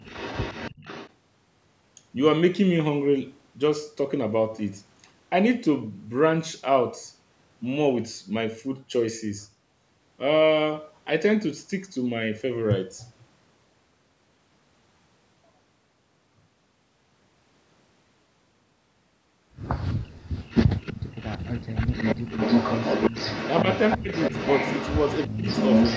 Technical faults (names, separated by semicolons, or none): echo leak; speech suppressed in double talk